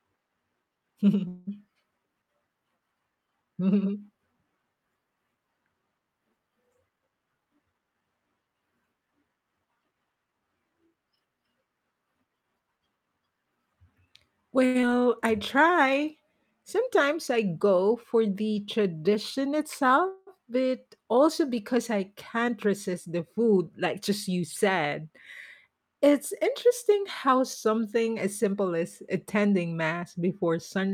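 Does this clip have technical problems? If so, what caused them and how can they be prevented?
Yes. Several network and jitter-buffer faults affect this speech clip.

Call audio freeze, 1.27 to 1.49 s and 20.08 to 20.29 s: the last sound is drawn out as a fading buzz for about 0.2 s before the speech resumes where it left off, with nothing lost. The likely cause is packets held up in transit until the jitter buffer ran dry, so the receiver extended the final sound and inserted a gap. A steadier network path or a larger jitter buffer would prevent this.

Jitter buffer speed-up, 6.96 to 8.02 s, 18.92 to 24.44 s and 28.46 to 29.73 s: the speech runs faster at unchanged pitch, at 117%, 103% and 108% speed. The buffer had overfilled after bunched packet arrivals, so the receiver trimmed pitch-period slices, roughly 0.2 s, 0.2 s and 0.1 s in total, to reduce delay. Avoiding bursty delivery would prevent it.

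Short stall from a late packet, 14.66 to 14.77 s: one sound is held too long, with a slight buzz or dip. A packet arrived late, and the receiver stretched the preceding sound for 87 ms, then resumed without losing anything. Reducing jitter on the link would prevent it.

Short concealed packet loss, 14.81 to 14.85 s: a brief smear replaces part of the speech. About 60 ms never reached the decoder, and the receiver filled the hole by extending the previous sound before blending back. Better loss protection, such as forward error correction, would prevent it.

Jitter buffer slow-down, 15.27 to 16.06 s: the speech drags slightly at 95% speed with unchanged pitch. The buffer was refilling its reserve, so the receiver repeated pitch periods, adding 47 ms. More consistent packet timing would prevent it.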